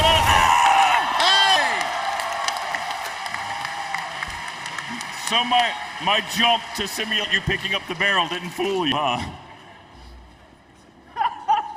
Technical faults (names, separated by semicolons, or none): dropped buffer (overrun)